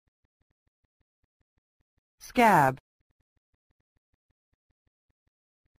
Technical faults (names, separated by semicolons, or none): imaging from sample-and-hold upsampling